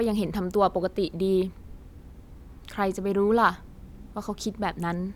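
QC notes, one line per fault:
No faults heard in the speech; nothing to log.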